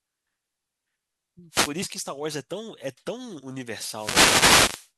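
A speech clip with two wireless microphone noise hits. The first runs from 1.50 to 1.73 s. The second, longer one runs from 3.88 to 4.92 s. Each is a burst of static over the voice. The analogue FM radio signal fades as reflections cancel, so receiver noise rises.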